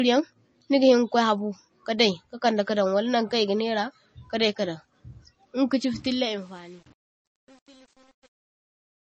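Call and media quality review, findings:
Watery, swirly sound with metallic chirps on s sounds and smeared onsets across the whole clip; nothing above 8.3 kHz. Likely MP3 compression at a low bitrate, fitting 32 kbps. Treble cut at a fixed frequency, weak lines flickering between frames.

Truncation distortion on a fade, 5.94 s to end. The fade-out from about 6 s turns gritty, worst from 6.2 s. The fade stage keeps too few bits, fitting 8-bit, undithered, so the quiet waveform collapses into coarse steps.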